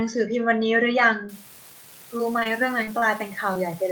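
From 1.29 s to the end of the speech, an unreliable data bit sets in. One data line is marginal, so a single bit flips at random in some samples. Each flip adds an error of the same fixed size, giving a steady crackle or fizz that sits on top of the speech and continues through the pauses, since it does not depend on the signal level.

Short concealed packet loss appears at 2.17, 2.39, 2.43, 2.83, 2.99 and 3.54 s. In each case a span of audio missed the decoder. Most gaps are about 20 ms, and the one at 2.83 s is about 40 ms, which fits 20 ms frames with two consecutive frames lost there. The receiver bridged each hole by extending the preceding sound, continuing the pitch through voiced parts and using shaped noise through unvoiced ones, then crossfading back into the real signal. Each event is heard as a brief smear or wobble. The back-to-back losses at 2.39 and 2.43 s run together into one longer blur.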